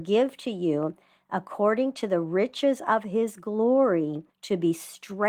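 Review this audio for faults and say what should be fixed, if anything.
The speech comes through Opus voice compression with its full audio band intact, and nothing in the signal needs to be fixed.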